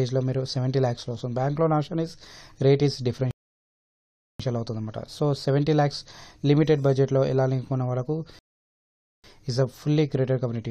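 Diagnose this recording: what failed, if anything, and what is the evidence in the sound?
The failure is a rebuffering stall at the network and playback stage. The sound drops to silence at 3.31 s until 4.40 s, and again at 8.39 s until 9.24 s. Each time it resumes exactly where it stopped. The player ran dry and waited for more data, adding about 1.09 s and 0.85 s.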